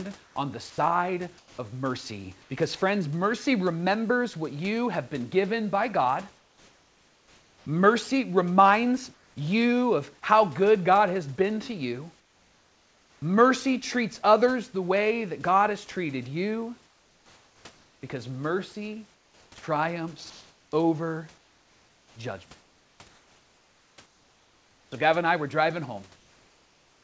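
From 0.24 to 2.50 s, and again at 6.38–7.66, 9.14–9.36, 12.20–13.22, 16.86–17.64 s and from 19.14 s to the end, pauses sound flat and featureless, the four middle ones about 3 to 4 dB quieter. This is likely comfort noise in place of the background.

From 0.70 to 0.78 s, 80 ms of sound vanishes into steady noise. The likely cause is sound dropped by the voice detector.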